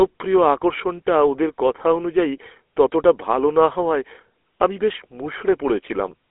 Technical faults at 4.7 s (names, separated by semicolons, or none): GSM full-rate codec